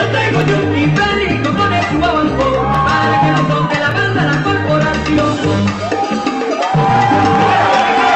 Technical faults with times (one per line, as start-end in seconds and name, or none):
0.42-7.42 clock drift buffer slips